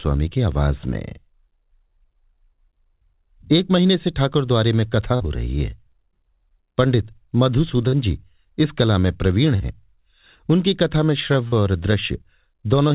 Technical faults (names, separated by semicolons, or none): short concealed packet loss; loud pop